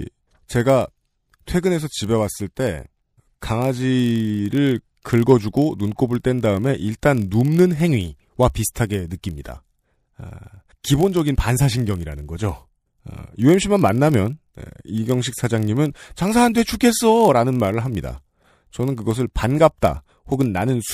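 Throughout the speech, a block size mismatch (padded) is audible. One stage writes slightly shorter blocks than the next reads. Each 1024-sample read ends in a tiny zero gap. This gives a steady buzz at 43.1 Hz. Playback slows only to 0.999 times, with unchanged timbre.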